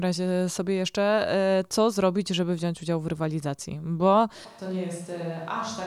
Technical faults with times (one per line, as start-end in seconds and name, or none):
4.47-5.86 switch to a distant microphone